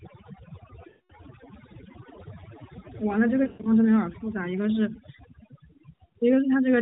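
Overdone noise removal runs through this whole speech clip: a noise reducer set too strong switches off individual frequency bands near its noise estimate, leaving near-silent backgrounds with twinkling specks. Lost AMR speech frames cause dropouts at 0.90–1.13 s, 3.44–3.71 s and 6.06–6.13 s. In each, the decoder repeats its last good pitch and vocal-tract settings with falling gain. The first gap lasts about 200 ms, which fits a run of ten 20 ms frames, so the sound smears and fades to silence. The second is broken up, with a longest stretch of about 120 ms. The last, about 60 ms, is brief. Throughout, the narrowband mobile codec cuts everything above 4 kHz and adds a light synthetic edge.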